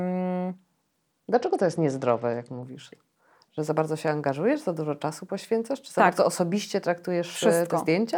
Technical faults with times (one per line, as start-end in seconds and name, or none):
1.34-2.63 Bluetooth SBC bit pool drop